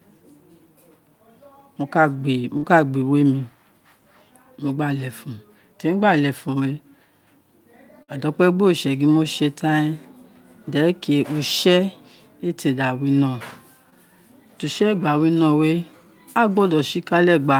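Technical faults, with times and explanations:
2.57–2.65 s and 8.03–8.10 s (just before "a da"), burst of packet loss: about 60 ms lost each time; the receiver extended the last sound for 50–55 ms, fading it, then skipped ahead.
13.90–13.94 s, just after "da wino", short concealed packet loss: 20 ms never arrived, so the receiver extended the preceding sound for 19 ms and blended back, leaving a brief smear.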